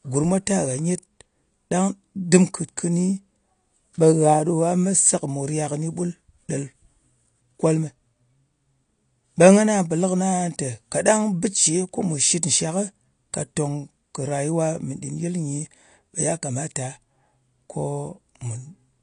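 From start to finish the speech carries AAC compression damage: nothing survives above about 9.8 kHz, and sibilants and held vowels take on a fizzy, warbling texture. Those traits point to likely AAC-LC coding at a low rate, around 32 kbps. A plain low-pass filter would also dull the top, but it leaves the remaining band clean. The spectral holes or substituted noise inside that band are what mark this as a codec quantising against a hearing model.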